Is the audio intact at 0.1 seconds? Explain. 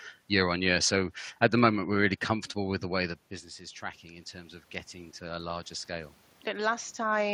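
Yes, the audio is intact at 0.1 seconds, with only the background noise of the room present in the recording.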